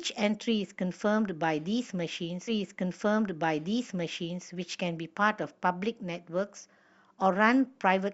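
A stream segment repeated at 2.47 s: the player fetched or queued the same chunk twice, so about two seconds of the speech, running to 4.47 s, plays a second time. A small blip marks the jump back before the passage restarts.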